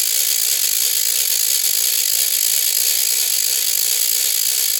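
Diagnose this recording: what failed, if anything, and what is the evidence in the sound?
Nothing failed; the music shows no audible faults.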